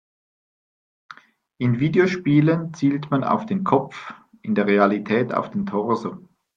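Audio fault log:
3.41 s, corrupt frame decoded: a brief blip cuts across the speech, lasting roughly the span of a single codec frame. Damaged bits in that frame were decoded anyway, so misread gains or codes placed energy at wrong frequencies, peaking at about -35 dBFS.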